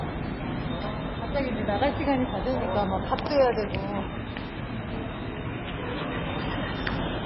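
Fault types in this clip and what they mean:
MP3 compression: The audio is likely heavily MP3-compressed at a very low bitrate, around 16 kbps, which fits a starved encoder. It has nothing above 5.6 kHz, so the top end sounds dull, and the weak detail that remains sounds watery and swirly. On a spectrogram the energy stops at a flat ceiling near 5.6 kHz, with speckled holes below it where bands drop in and out between frames.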